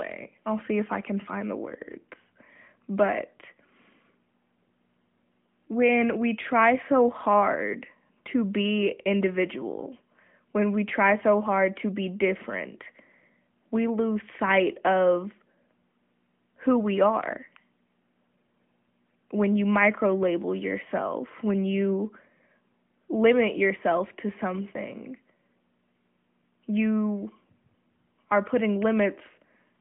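No technical faults are audible in this speech recording.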